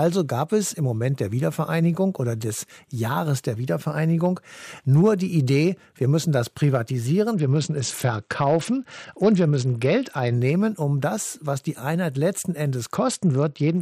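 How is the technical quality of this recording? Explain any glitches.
The speech is marred twice by a Bluetooth SBC bit pool drop, from 7.34 to 10.34 s and from 12.95 s to the end. The treble turns dull and gritty, which fits a congested link pushing the bit pool from 31 to 9, roughly 72 kbps.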